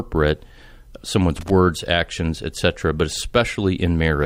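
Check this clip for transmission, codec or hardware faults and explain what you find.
There's one hardware fault: loose connector crackle from 1.36 to 1.50 s, just before "actions etc but". A worn or dirty contact is making and breaking as it shifts, chopping the speech and popping on any DC, so you get a short, irregular scratchy burst.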